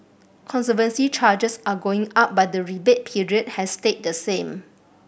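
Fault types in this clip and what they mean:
Nothing in the speech stood out as a technical fault on listening.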